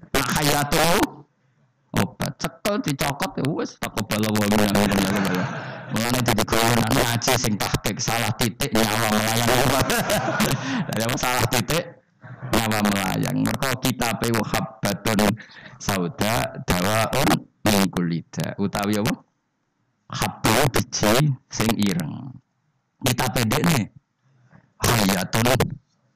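The audio suffers from integer overflow across its whole length: the signal was pushed about 8 dB beyond full scale, and instead of being held at the limit, each sample past the maximum wrapped around to the opposite extreme. Only a small share of samples, around two percent, go over, but each one produces a violent crack on the loudest moments, far harsher than clipping. On a waveform the peaks jump abruptly from top to bottom rail; a spectrogram shows sharp full-band vertical streaks at those instants.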